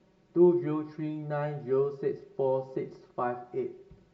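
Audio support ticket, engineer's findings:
Hollow, phasey speech throughout. Channel delay (comb filtering): one channel lags around 5 ms before mono sum, cancelling evenly spaced notches from roughly 100 Hz upward.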